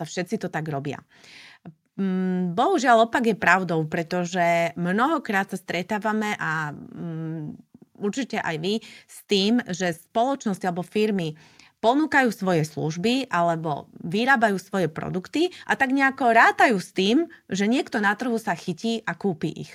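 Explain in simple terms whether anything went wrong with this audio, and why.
Nothing went wrong: the speech recording shows no technical faults.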